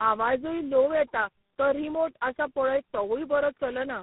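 The call passed through a chain of four separate speech coders, G.726, G.729A, GSM full rate and G.726 again, with G.711 links between them. Each re-encoded the last one's degraded output. This tandem speech coding leaves the speech rough, muffled and warbly.

At 1.22 s a single sharp click cuts through, most likely from dropped samples, with roughly one sample missing so the waveform steps abruptly. A second click follows at 2.79 s, just after "आसा पळय".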